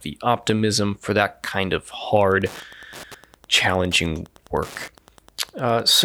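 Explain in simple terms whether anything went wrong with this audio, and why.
Something did go wrong. From 2.18 s to the end, a steady ticking runs under the speech. It repeats about ten times a second, once every 102.4 milliseconds. This is Wi-Fi interference. A Wi-Fi radio sat close to the audio equipment. It sends a short signal at that regular rate. The audio circuit picked each one up and turned it into a click. The ticks are quiet, well below the speech.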